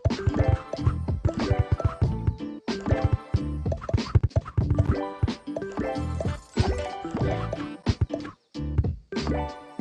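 No faults can be heard anywhere in this recording.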